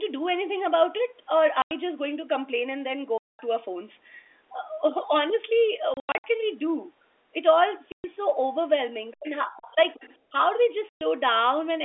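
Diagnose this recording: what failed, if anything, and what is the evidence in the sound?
Network stage: packet loss filled with silence. The sound drops to dead silence at 1.62 s (90 ms), 3.18–3.39 s (210 ms), 7.92 s (120 ms) and 10.89 s (120 ms), plus scattered holes between 5.94 and 6.24 s. Every gap is a multiple of 30 ms, which points to 30 ms packets replaced by zeros.

Call processing: the other side's voice leaking through. A second, faint voice sits under the talker at 9.11–9.31 s, about 25 dB down, and again at 9.57–10.17 s, about 20 dB down. This is likely loudspeaker echo that the echo canceller failed to remove from the microphone path.

Call processing: speech suppressed in double talk. From 9.14 to 9.79 s, while the leaking voice is present, the talker dips and breaks up for roughly half a second in total, falling by around 30 dB at worst. The likely cause is an echo canceller that attenuated both signals when it could not separate them.

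Call processing: background gated by the echo canceller. At 10.19–10.31 s the room sound drops by about 17 dB for roughly 100 ms, right after the leaked far-end voice ends. The canceller clamped the microphone hard and released it a moment later.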